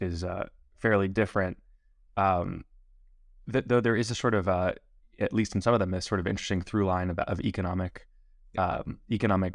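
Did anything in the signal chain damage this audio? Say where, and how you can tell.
No, nothing in the signal chain has left an audible mark on this speech recording. None of the stages, from the analogue input through to playback, shows any damage that a listener could point to.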